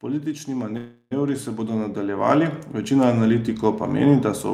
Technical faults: automatic gain rising; call audio freeze

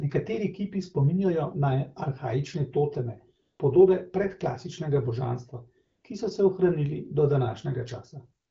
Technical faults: AMR comfort noise

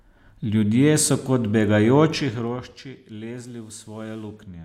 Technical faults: zipper noise

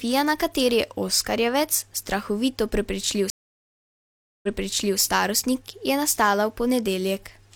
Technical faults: stream reconnect

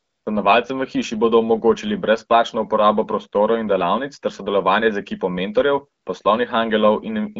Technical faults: AMR comfort noise

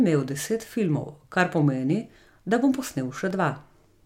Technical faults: periodic USB or driver dropouts

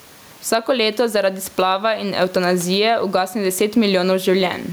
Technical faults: gain pumping

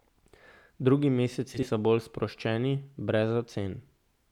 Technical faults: frames out of order

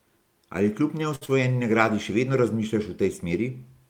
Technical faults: short stall from a late packet; short concealed packet loss

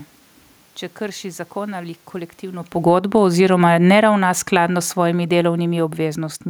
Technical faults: automatic gain falling

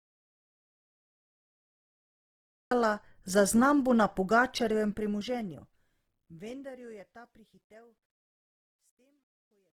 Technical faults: Opus compression; audio dropout to silence; truncation distortion on a fade

